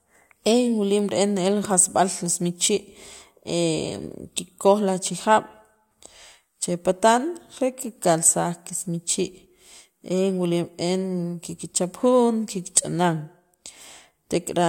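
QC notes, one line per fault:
No technical faults are audible anywhere in the recording.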